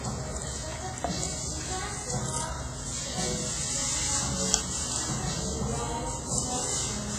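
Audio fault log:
throughout, WMA compression: the sound rings and smears, with a washy hiss that swells and fades along with the signal, and nothing survives above 15.5 kHz. This likely comes from a transform codec such as WMA spreading its quantisation noise over long blocks tens of milliseconds wide and zeroing weaker lines, heavy damage that fits a bitrate near 24 kbps. On a spectrogram, expect a hard ceiling at 15.5 kHz, patchy holes where components dropped out, and smeared energy around transients in the waveform.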